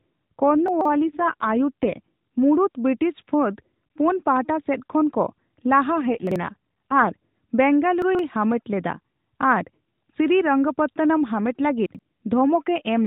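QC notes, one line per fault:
0.51–1.97 s and 5.96–7.12 s, AMR rate drop: the band stays capped at 4 kHz and nothing drops out, but the speech turns rougher, buzzier and more synthetic, then returns to its earlier light coding roughness. The change fits the narrowband mobile codec being pushed from 12.2 kbps down to about 5.9 kbps over a weak link. Fewer bits go to modelling the voice and more go to error protection.
0.68–0.85 s, 6.27–6.36 s, 8.02–8.19 s and 11.86–11.99 s, chunks out of order: each is a short, jumbled stutter. No audio is missing, but blocks of about 43 ms play in the wrong sequence. A block that arrived late plays after the blocks that should follow it. Here it is late by roughly 130, 40, 130 and 85 ms. This creates three hard joins.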